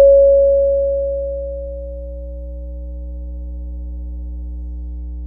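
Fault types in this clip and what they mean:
Mains hum: power-line interference at 60 Hz runs steadily under the sound, about 15 dB below it; a spectrogram shows unbroken horizontal lines at 60 Hz and low harmonics.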